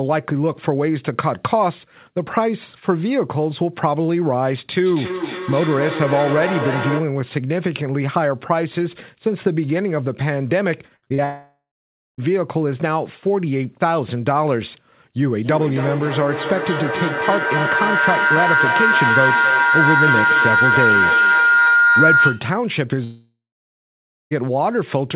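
From 4.86 to 7.24 s there is feedback echo between two devices. Each phrase returns roughly every 0.3 s, thinner and ringing, peaking about 5 dB below the speech. Unlike a howl, the repeats fade.

From 10.96 to 11.20 s, repeated packet loss gives a robotic, choppy sound. Four short holes, the longest 60 ms, are patched by stretching the last sound, which fills more than half of that span.

Straight after, from 11.24 to 12.20 s, comes a long network dropout, likely from audio not arriving. A fading buzz gives way to about 0.55 s of silence, and nearly a second of material never returns. This differs from the packet loss by being one long gap rather than many brief ones.

From 15.33 to 22.56 s, a feedback howl builds around 1.5 kHz, with a loop delay of roughly 0.3 s, reaching about 4 dB above the speech. Unlike the earlier echo, the loop grows instead of dying away.

A second dropout from 23.04 to 24.33 s loses about 1.3 s, with roughly 0.94 s of silence after the buzz fades. 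Throughout, the call path's codec leaves nothing above 4 kHz.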